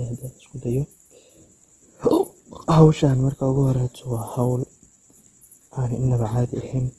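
Speech clip, likely passed through low-bitrate Opus compression in its music mode, which fits roughly 16 kbps: the encoder fills starved bands with folded or noise content, so the speech sounds plainly rough and grainy throughout, with nothing above 12.2 kHz.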